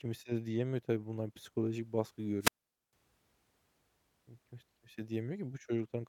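At 2.40 s, just after "tabii bunlar psikolojik baskı", the speech suffers a wireless microphone squelch dropout. The radio link from the transmitter weakens. Hiss rises briefly as the signal fades. The receiver's squelch then cuts the output. About 0.45 s of near silence follows. The speech comes back by 2.93 s. The whole event lasts just over half a second. It leaves a hole in the speech.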